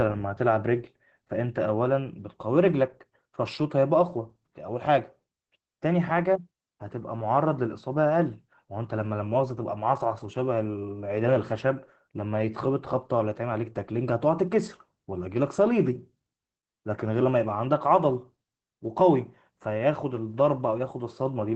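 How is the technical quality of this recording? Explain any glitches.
The quality is limited by Opus voice compression throughout: the speech is cut off above 8.5 kHz and sounds hoarse and faintly robotic, fitting coarse SILK coding around 12 kbps. Unlike a simple low-pass filter, this also grains the speech itself.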